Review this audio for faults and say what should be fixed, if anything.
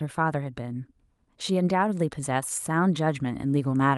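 Nothing needs fixing; no faults can be heard.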